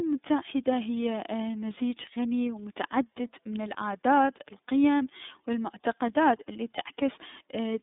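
This speech clip passed end to end through the iLBC codec, whose 30 ms frames each coded independently fit its 13.33 kbps mode. The band is confined to about 150 Hz to 3.7 kHz, nothing above 3.8 kHz, and the excitation coding leaves a plainly rough, synthetic edge.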